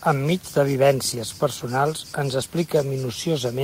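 Dropped buffers (overrun) at 1.12 s and 2.42 s: each is a jump where the speech skips ahead with no gap, about 20 ms missing at the first and about 40 ms at the second, likely because audio was not read before the hardware overwrote it.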